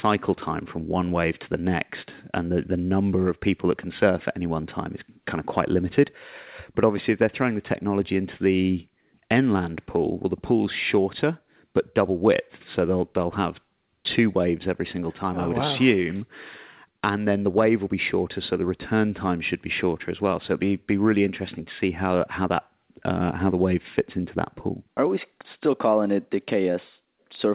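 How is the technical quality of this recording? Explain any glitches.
No glitches or faults audible.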